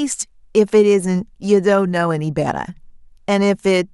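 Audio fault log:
No technical faults can be heard in the speech signal, which has continuous audio with nothing dropped, clipped or distorted.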